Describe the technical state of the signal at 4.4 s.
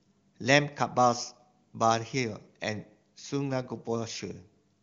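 At 4.4 s the speech is intact, carried cleanly by the AMR wideband (HD Voice) codec at 23.85 kbit/s, which leaves its band ending near 7.3 kHz.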